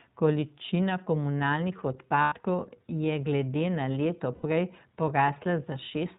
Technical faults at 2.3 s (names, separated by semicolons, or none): iLBC codec; lost iLBC frames